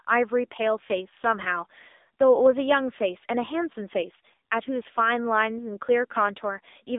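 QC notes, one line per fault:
Throughout, AMR narrowband mobile codec: speech band-limited to roughly 250 Hz to 3.7 kHz, nothing above 3.8 kHz, with heavy buzzy, synthetic coloration from vocal-tract modelling on 20 ms frames; the coarse pulse excitation fits a low mode near 6.7 kbps.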